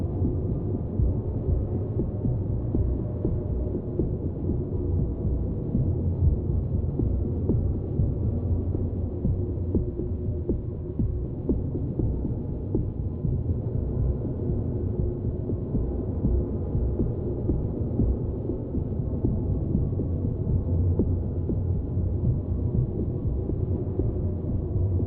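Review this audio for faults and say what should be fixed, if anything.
Nothing in the signal needs fixing, as the sounds in this recording reach the listener continuous and intact, with no technical fault to be heard anywhere along the way.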